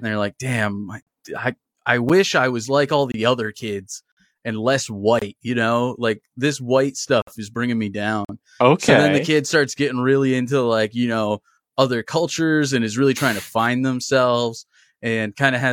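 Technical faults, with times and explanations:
1.03–8.29 s, gaps between stream segments: at 1.03, 2.09, 3.12, 4.12, 5.19 (after "other kids and less"), 7.22 (before "is bringing me") and 8.25 s (after "is bringing me"), timestamps of consecutive one-second segments fail to meet, so the player pads the mismatch with silence. Holes of roughly 7 to 54 ms with abrupt edges cut into the speech about once per second; nothing is lost, and the speech simply resumes after each dropout.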